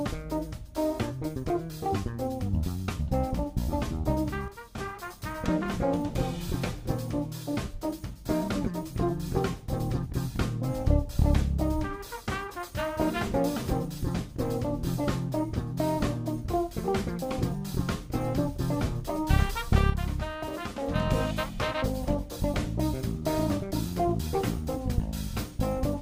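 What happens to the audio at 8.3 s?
Nothing goes wrong at 8.3 s; the audio plays through that moment intact, with no dropout, click, distortion or other fault.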